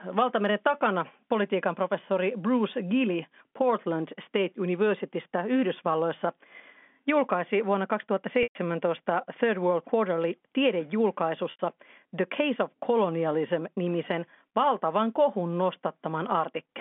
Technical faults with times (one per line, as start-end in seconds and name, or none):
8.43-8.55 packet loss with pitch repetition
11.51-11.59 packet loss with pitch repetition